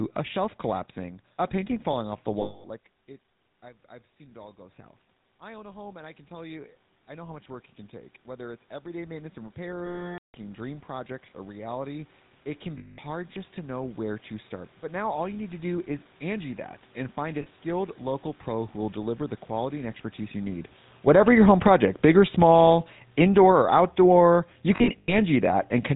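Throughout, the speech carries the plainly audible buzzy, gravelly roughness of the GSM full-rate codec, which fits its 13 kbps coding. It models the vocal tract and excites it with sparse regular pulses, and nothing above 4 kHz survives. The result is a dull, band-limited grit rather than random hiss.

At 2.42 to 2.65 s, just after "painting falling off the", lost GSM frames leave about 220 ms in which the last good frame is repeated. It is heard as a metallic, ringing hold, not a clean gap. The same happens at 9.86 to 10.35 s (480 ms, long enough to decay toward silence), 12.78 to 12.99 s (200 ms), and briefly at 17.42 to 17.47 s (40 ms) between "that and find a" and "local pro who will". At 24.76 to 25.15 s about 180 ms is lost in scattered bursts, the longest roughly a tenth of a second, giving a stuttering rasp.

From 4.17 to 15.55 s, after "it I've I've" and until "do is", automatic gain rising follows an input drop of about 19 dB by slowly adding about 16 dB. 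Voice and room noise swell together. A talker's movement, as around 2.5 s, changes only the voice level and leaves the background unchanged.

From 20.93 to 25.58 s, automatic gain falling lowers the gain by about 10 dB. The sound sinks together with its background. This shared fall separates it from the level shift around 20.5 s, which comes from the talker moving.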